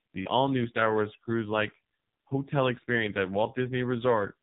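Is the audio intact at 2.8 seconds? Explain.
No, not at 2.8 seconds, and not anywhere else in this speech clip either, since the AMR narrowband mobile codec damage runs from start to finish. Everything above about 3.8 kHz is gone, leaving that boxed-in phone-line sound. The codec models the voice as a vocal-tract filter fed by a few pulses per short block, and here the damage is heavy, with a buzzy, synthetic edge that fits a very low bitrate of around 5.9 kbps.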